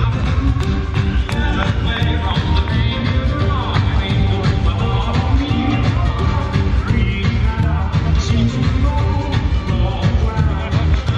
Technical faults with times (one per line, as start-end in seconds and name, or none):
2.02-5.41 mains hum